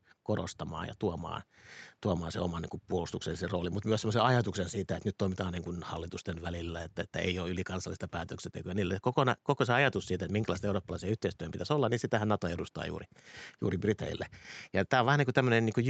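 Speech, with no technical fault to be heard. Nothing is present above 8 kHz, which is the normal limit set by the call microphone processing and the WebRTC call path, whose Opus coding fits an 8 kHz bandwidth.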